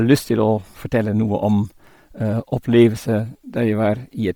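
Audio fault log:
throughout: Bluetooth LC3 compression. The speech has a heavy breathy, grainy edge from noise-filled highs, likely LC3, fitting 32 kbps with 10 ms frames.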